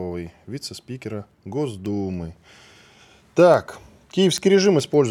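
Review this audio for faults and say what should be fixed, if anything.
Word clock ticks run through the speech from 0.18 s to 5.08 s: about forty sharp, uneven clicks, one every 0.15 s or so. The receiving device's clock drifts around 150 ppm from the sender's, so each slip misreads samples and drops or repeats one. Lock the receiver to the incoming digital signal or a shared word clock so both ends run at the same rate.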